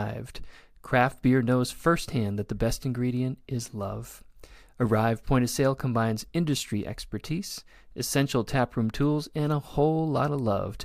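At 3.68 s, just after "that the best ingredient", a single sharp click cuts through the speech. A second click follows at 4.87 s. Each is a thin tick, with no gap and no sound missing. This is likely dropped samples. A fraction of a millisecond of audio goes missing, so the waveform jumps straight to a later value. That sudden step produces the click.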